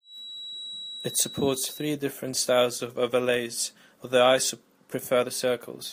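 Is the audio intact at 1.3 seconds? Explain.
No. At 1.3 seconds a feedback whistle sits behind the speech. It runs from the start of the clip to 2.0 s as a thin, steady tone at 3.9 kHz, roughly 15 dB below the speech and swelling and fading slowly in level. The likely cause is a loudspeaker-to-microphone loop held just at the edge of feedback, so one frequency rings on without building up. A spectrogram would show a narrow horizontal line at 3.9 kHz across that span.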